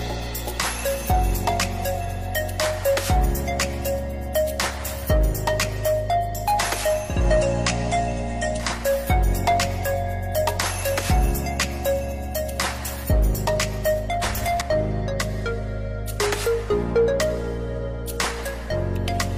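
From 6.96 s to 8.88 s the audio has digital radio blending to analogue. Over a 313 ms cross-fade it drops to the FM broadcast, so a spectrogram shows a faint hiss floor about 30 dB below the signal. The waveform level shifts about 2 dB until it blends back.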